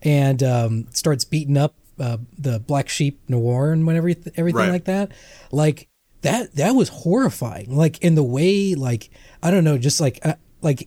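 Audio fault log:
No faults detected in this speech recording.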